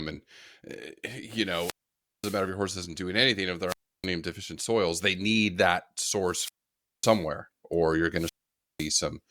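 At 1.43–2.49 s, 3.67–4.07 s, 6.23–7.27 s and 8.13–8.92 s, wireless microphone squelch dropouts occur: the weakening radio link swells into hiss, then the receiver's squelch mutes it for roughly 0.3–0.55 s. That rising static before the silence sets these apart from a plain digital gap.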